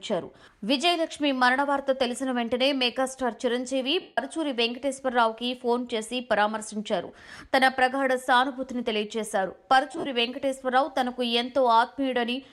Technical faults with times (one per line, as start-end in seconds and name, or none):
4.01-4.18 lost LE Audio frames
7.08-7.10 lost LE Audio frames
9.92-10.06 lost LE Audio frames